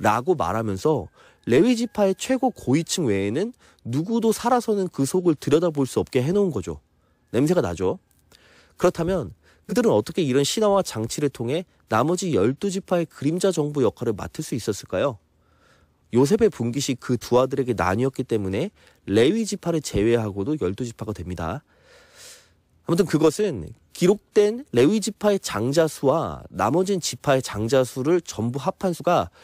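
Three times in the speech, at 9.69 to 9.73 s, 17.21 to 17.24 s and 28.96 to 29.00 s, the audio lurches forward, and roughly 50 ms of sound simply vanishes. These are compressed frames skipped: each time, about one frame was never played, likely because it was missing or rejected as damaged by the decoder. The jump fits a 46.4 ms frame.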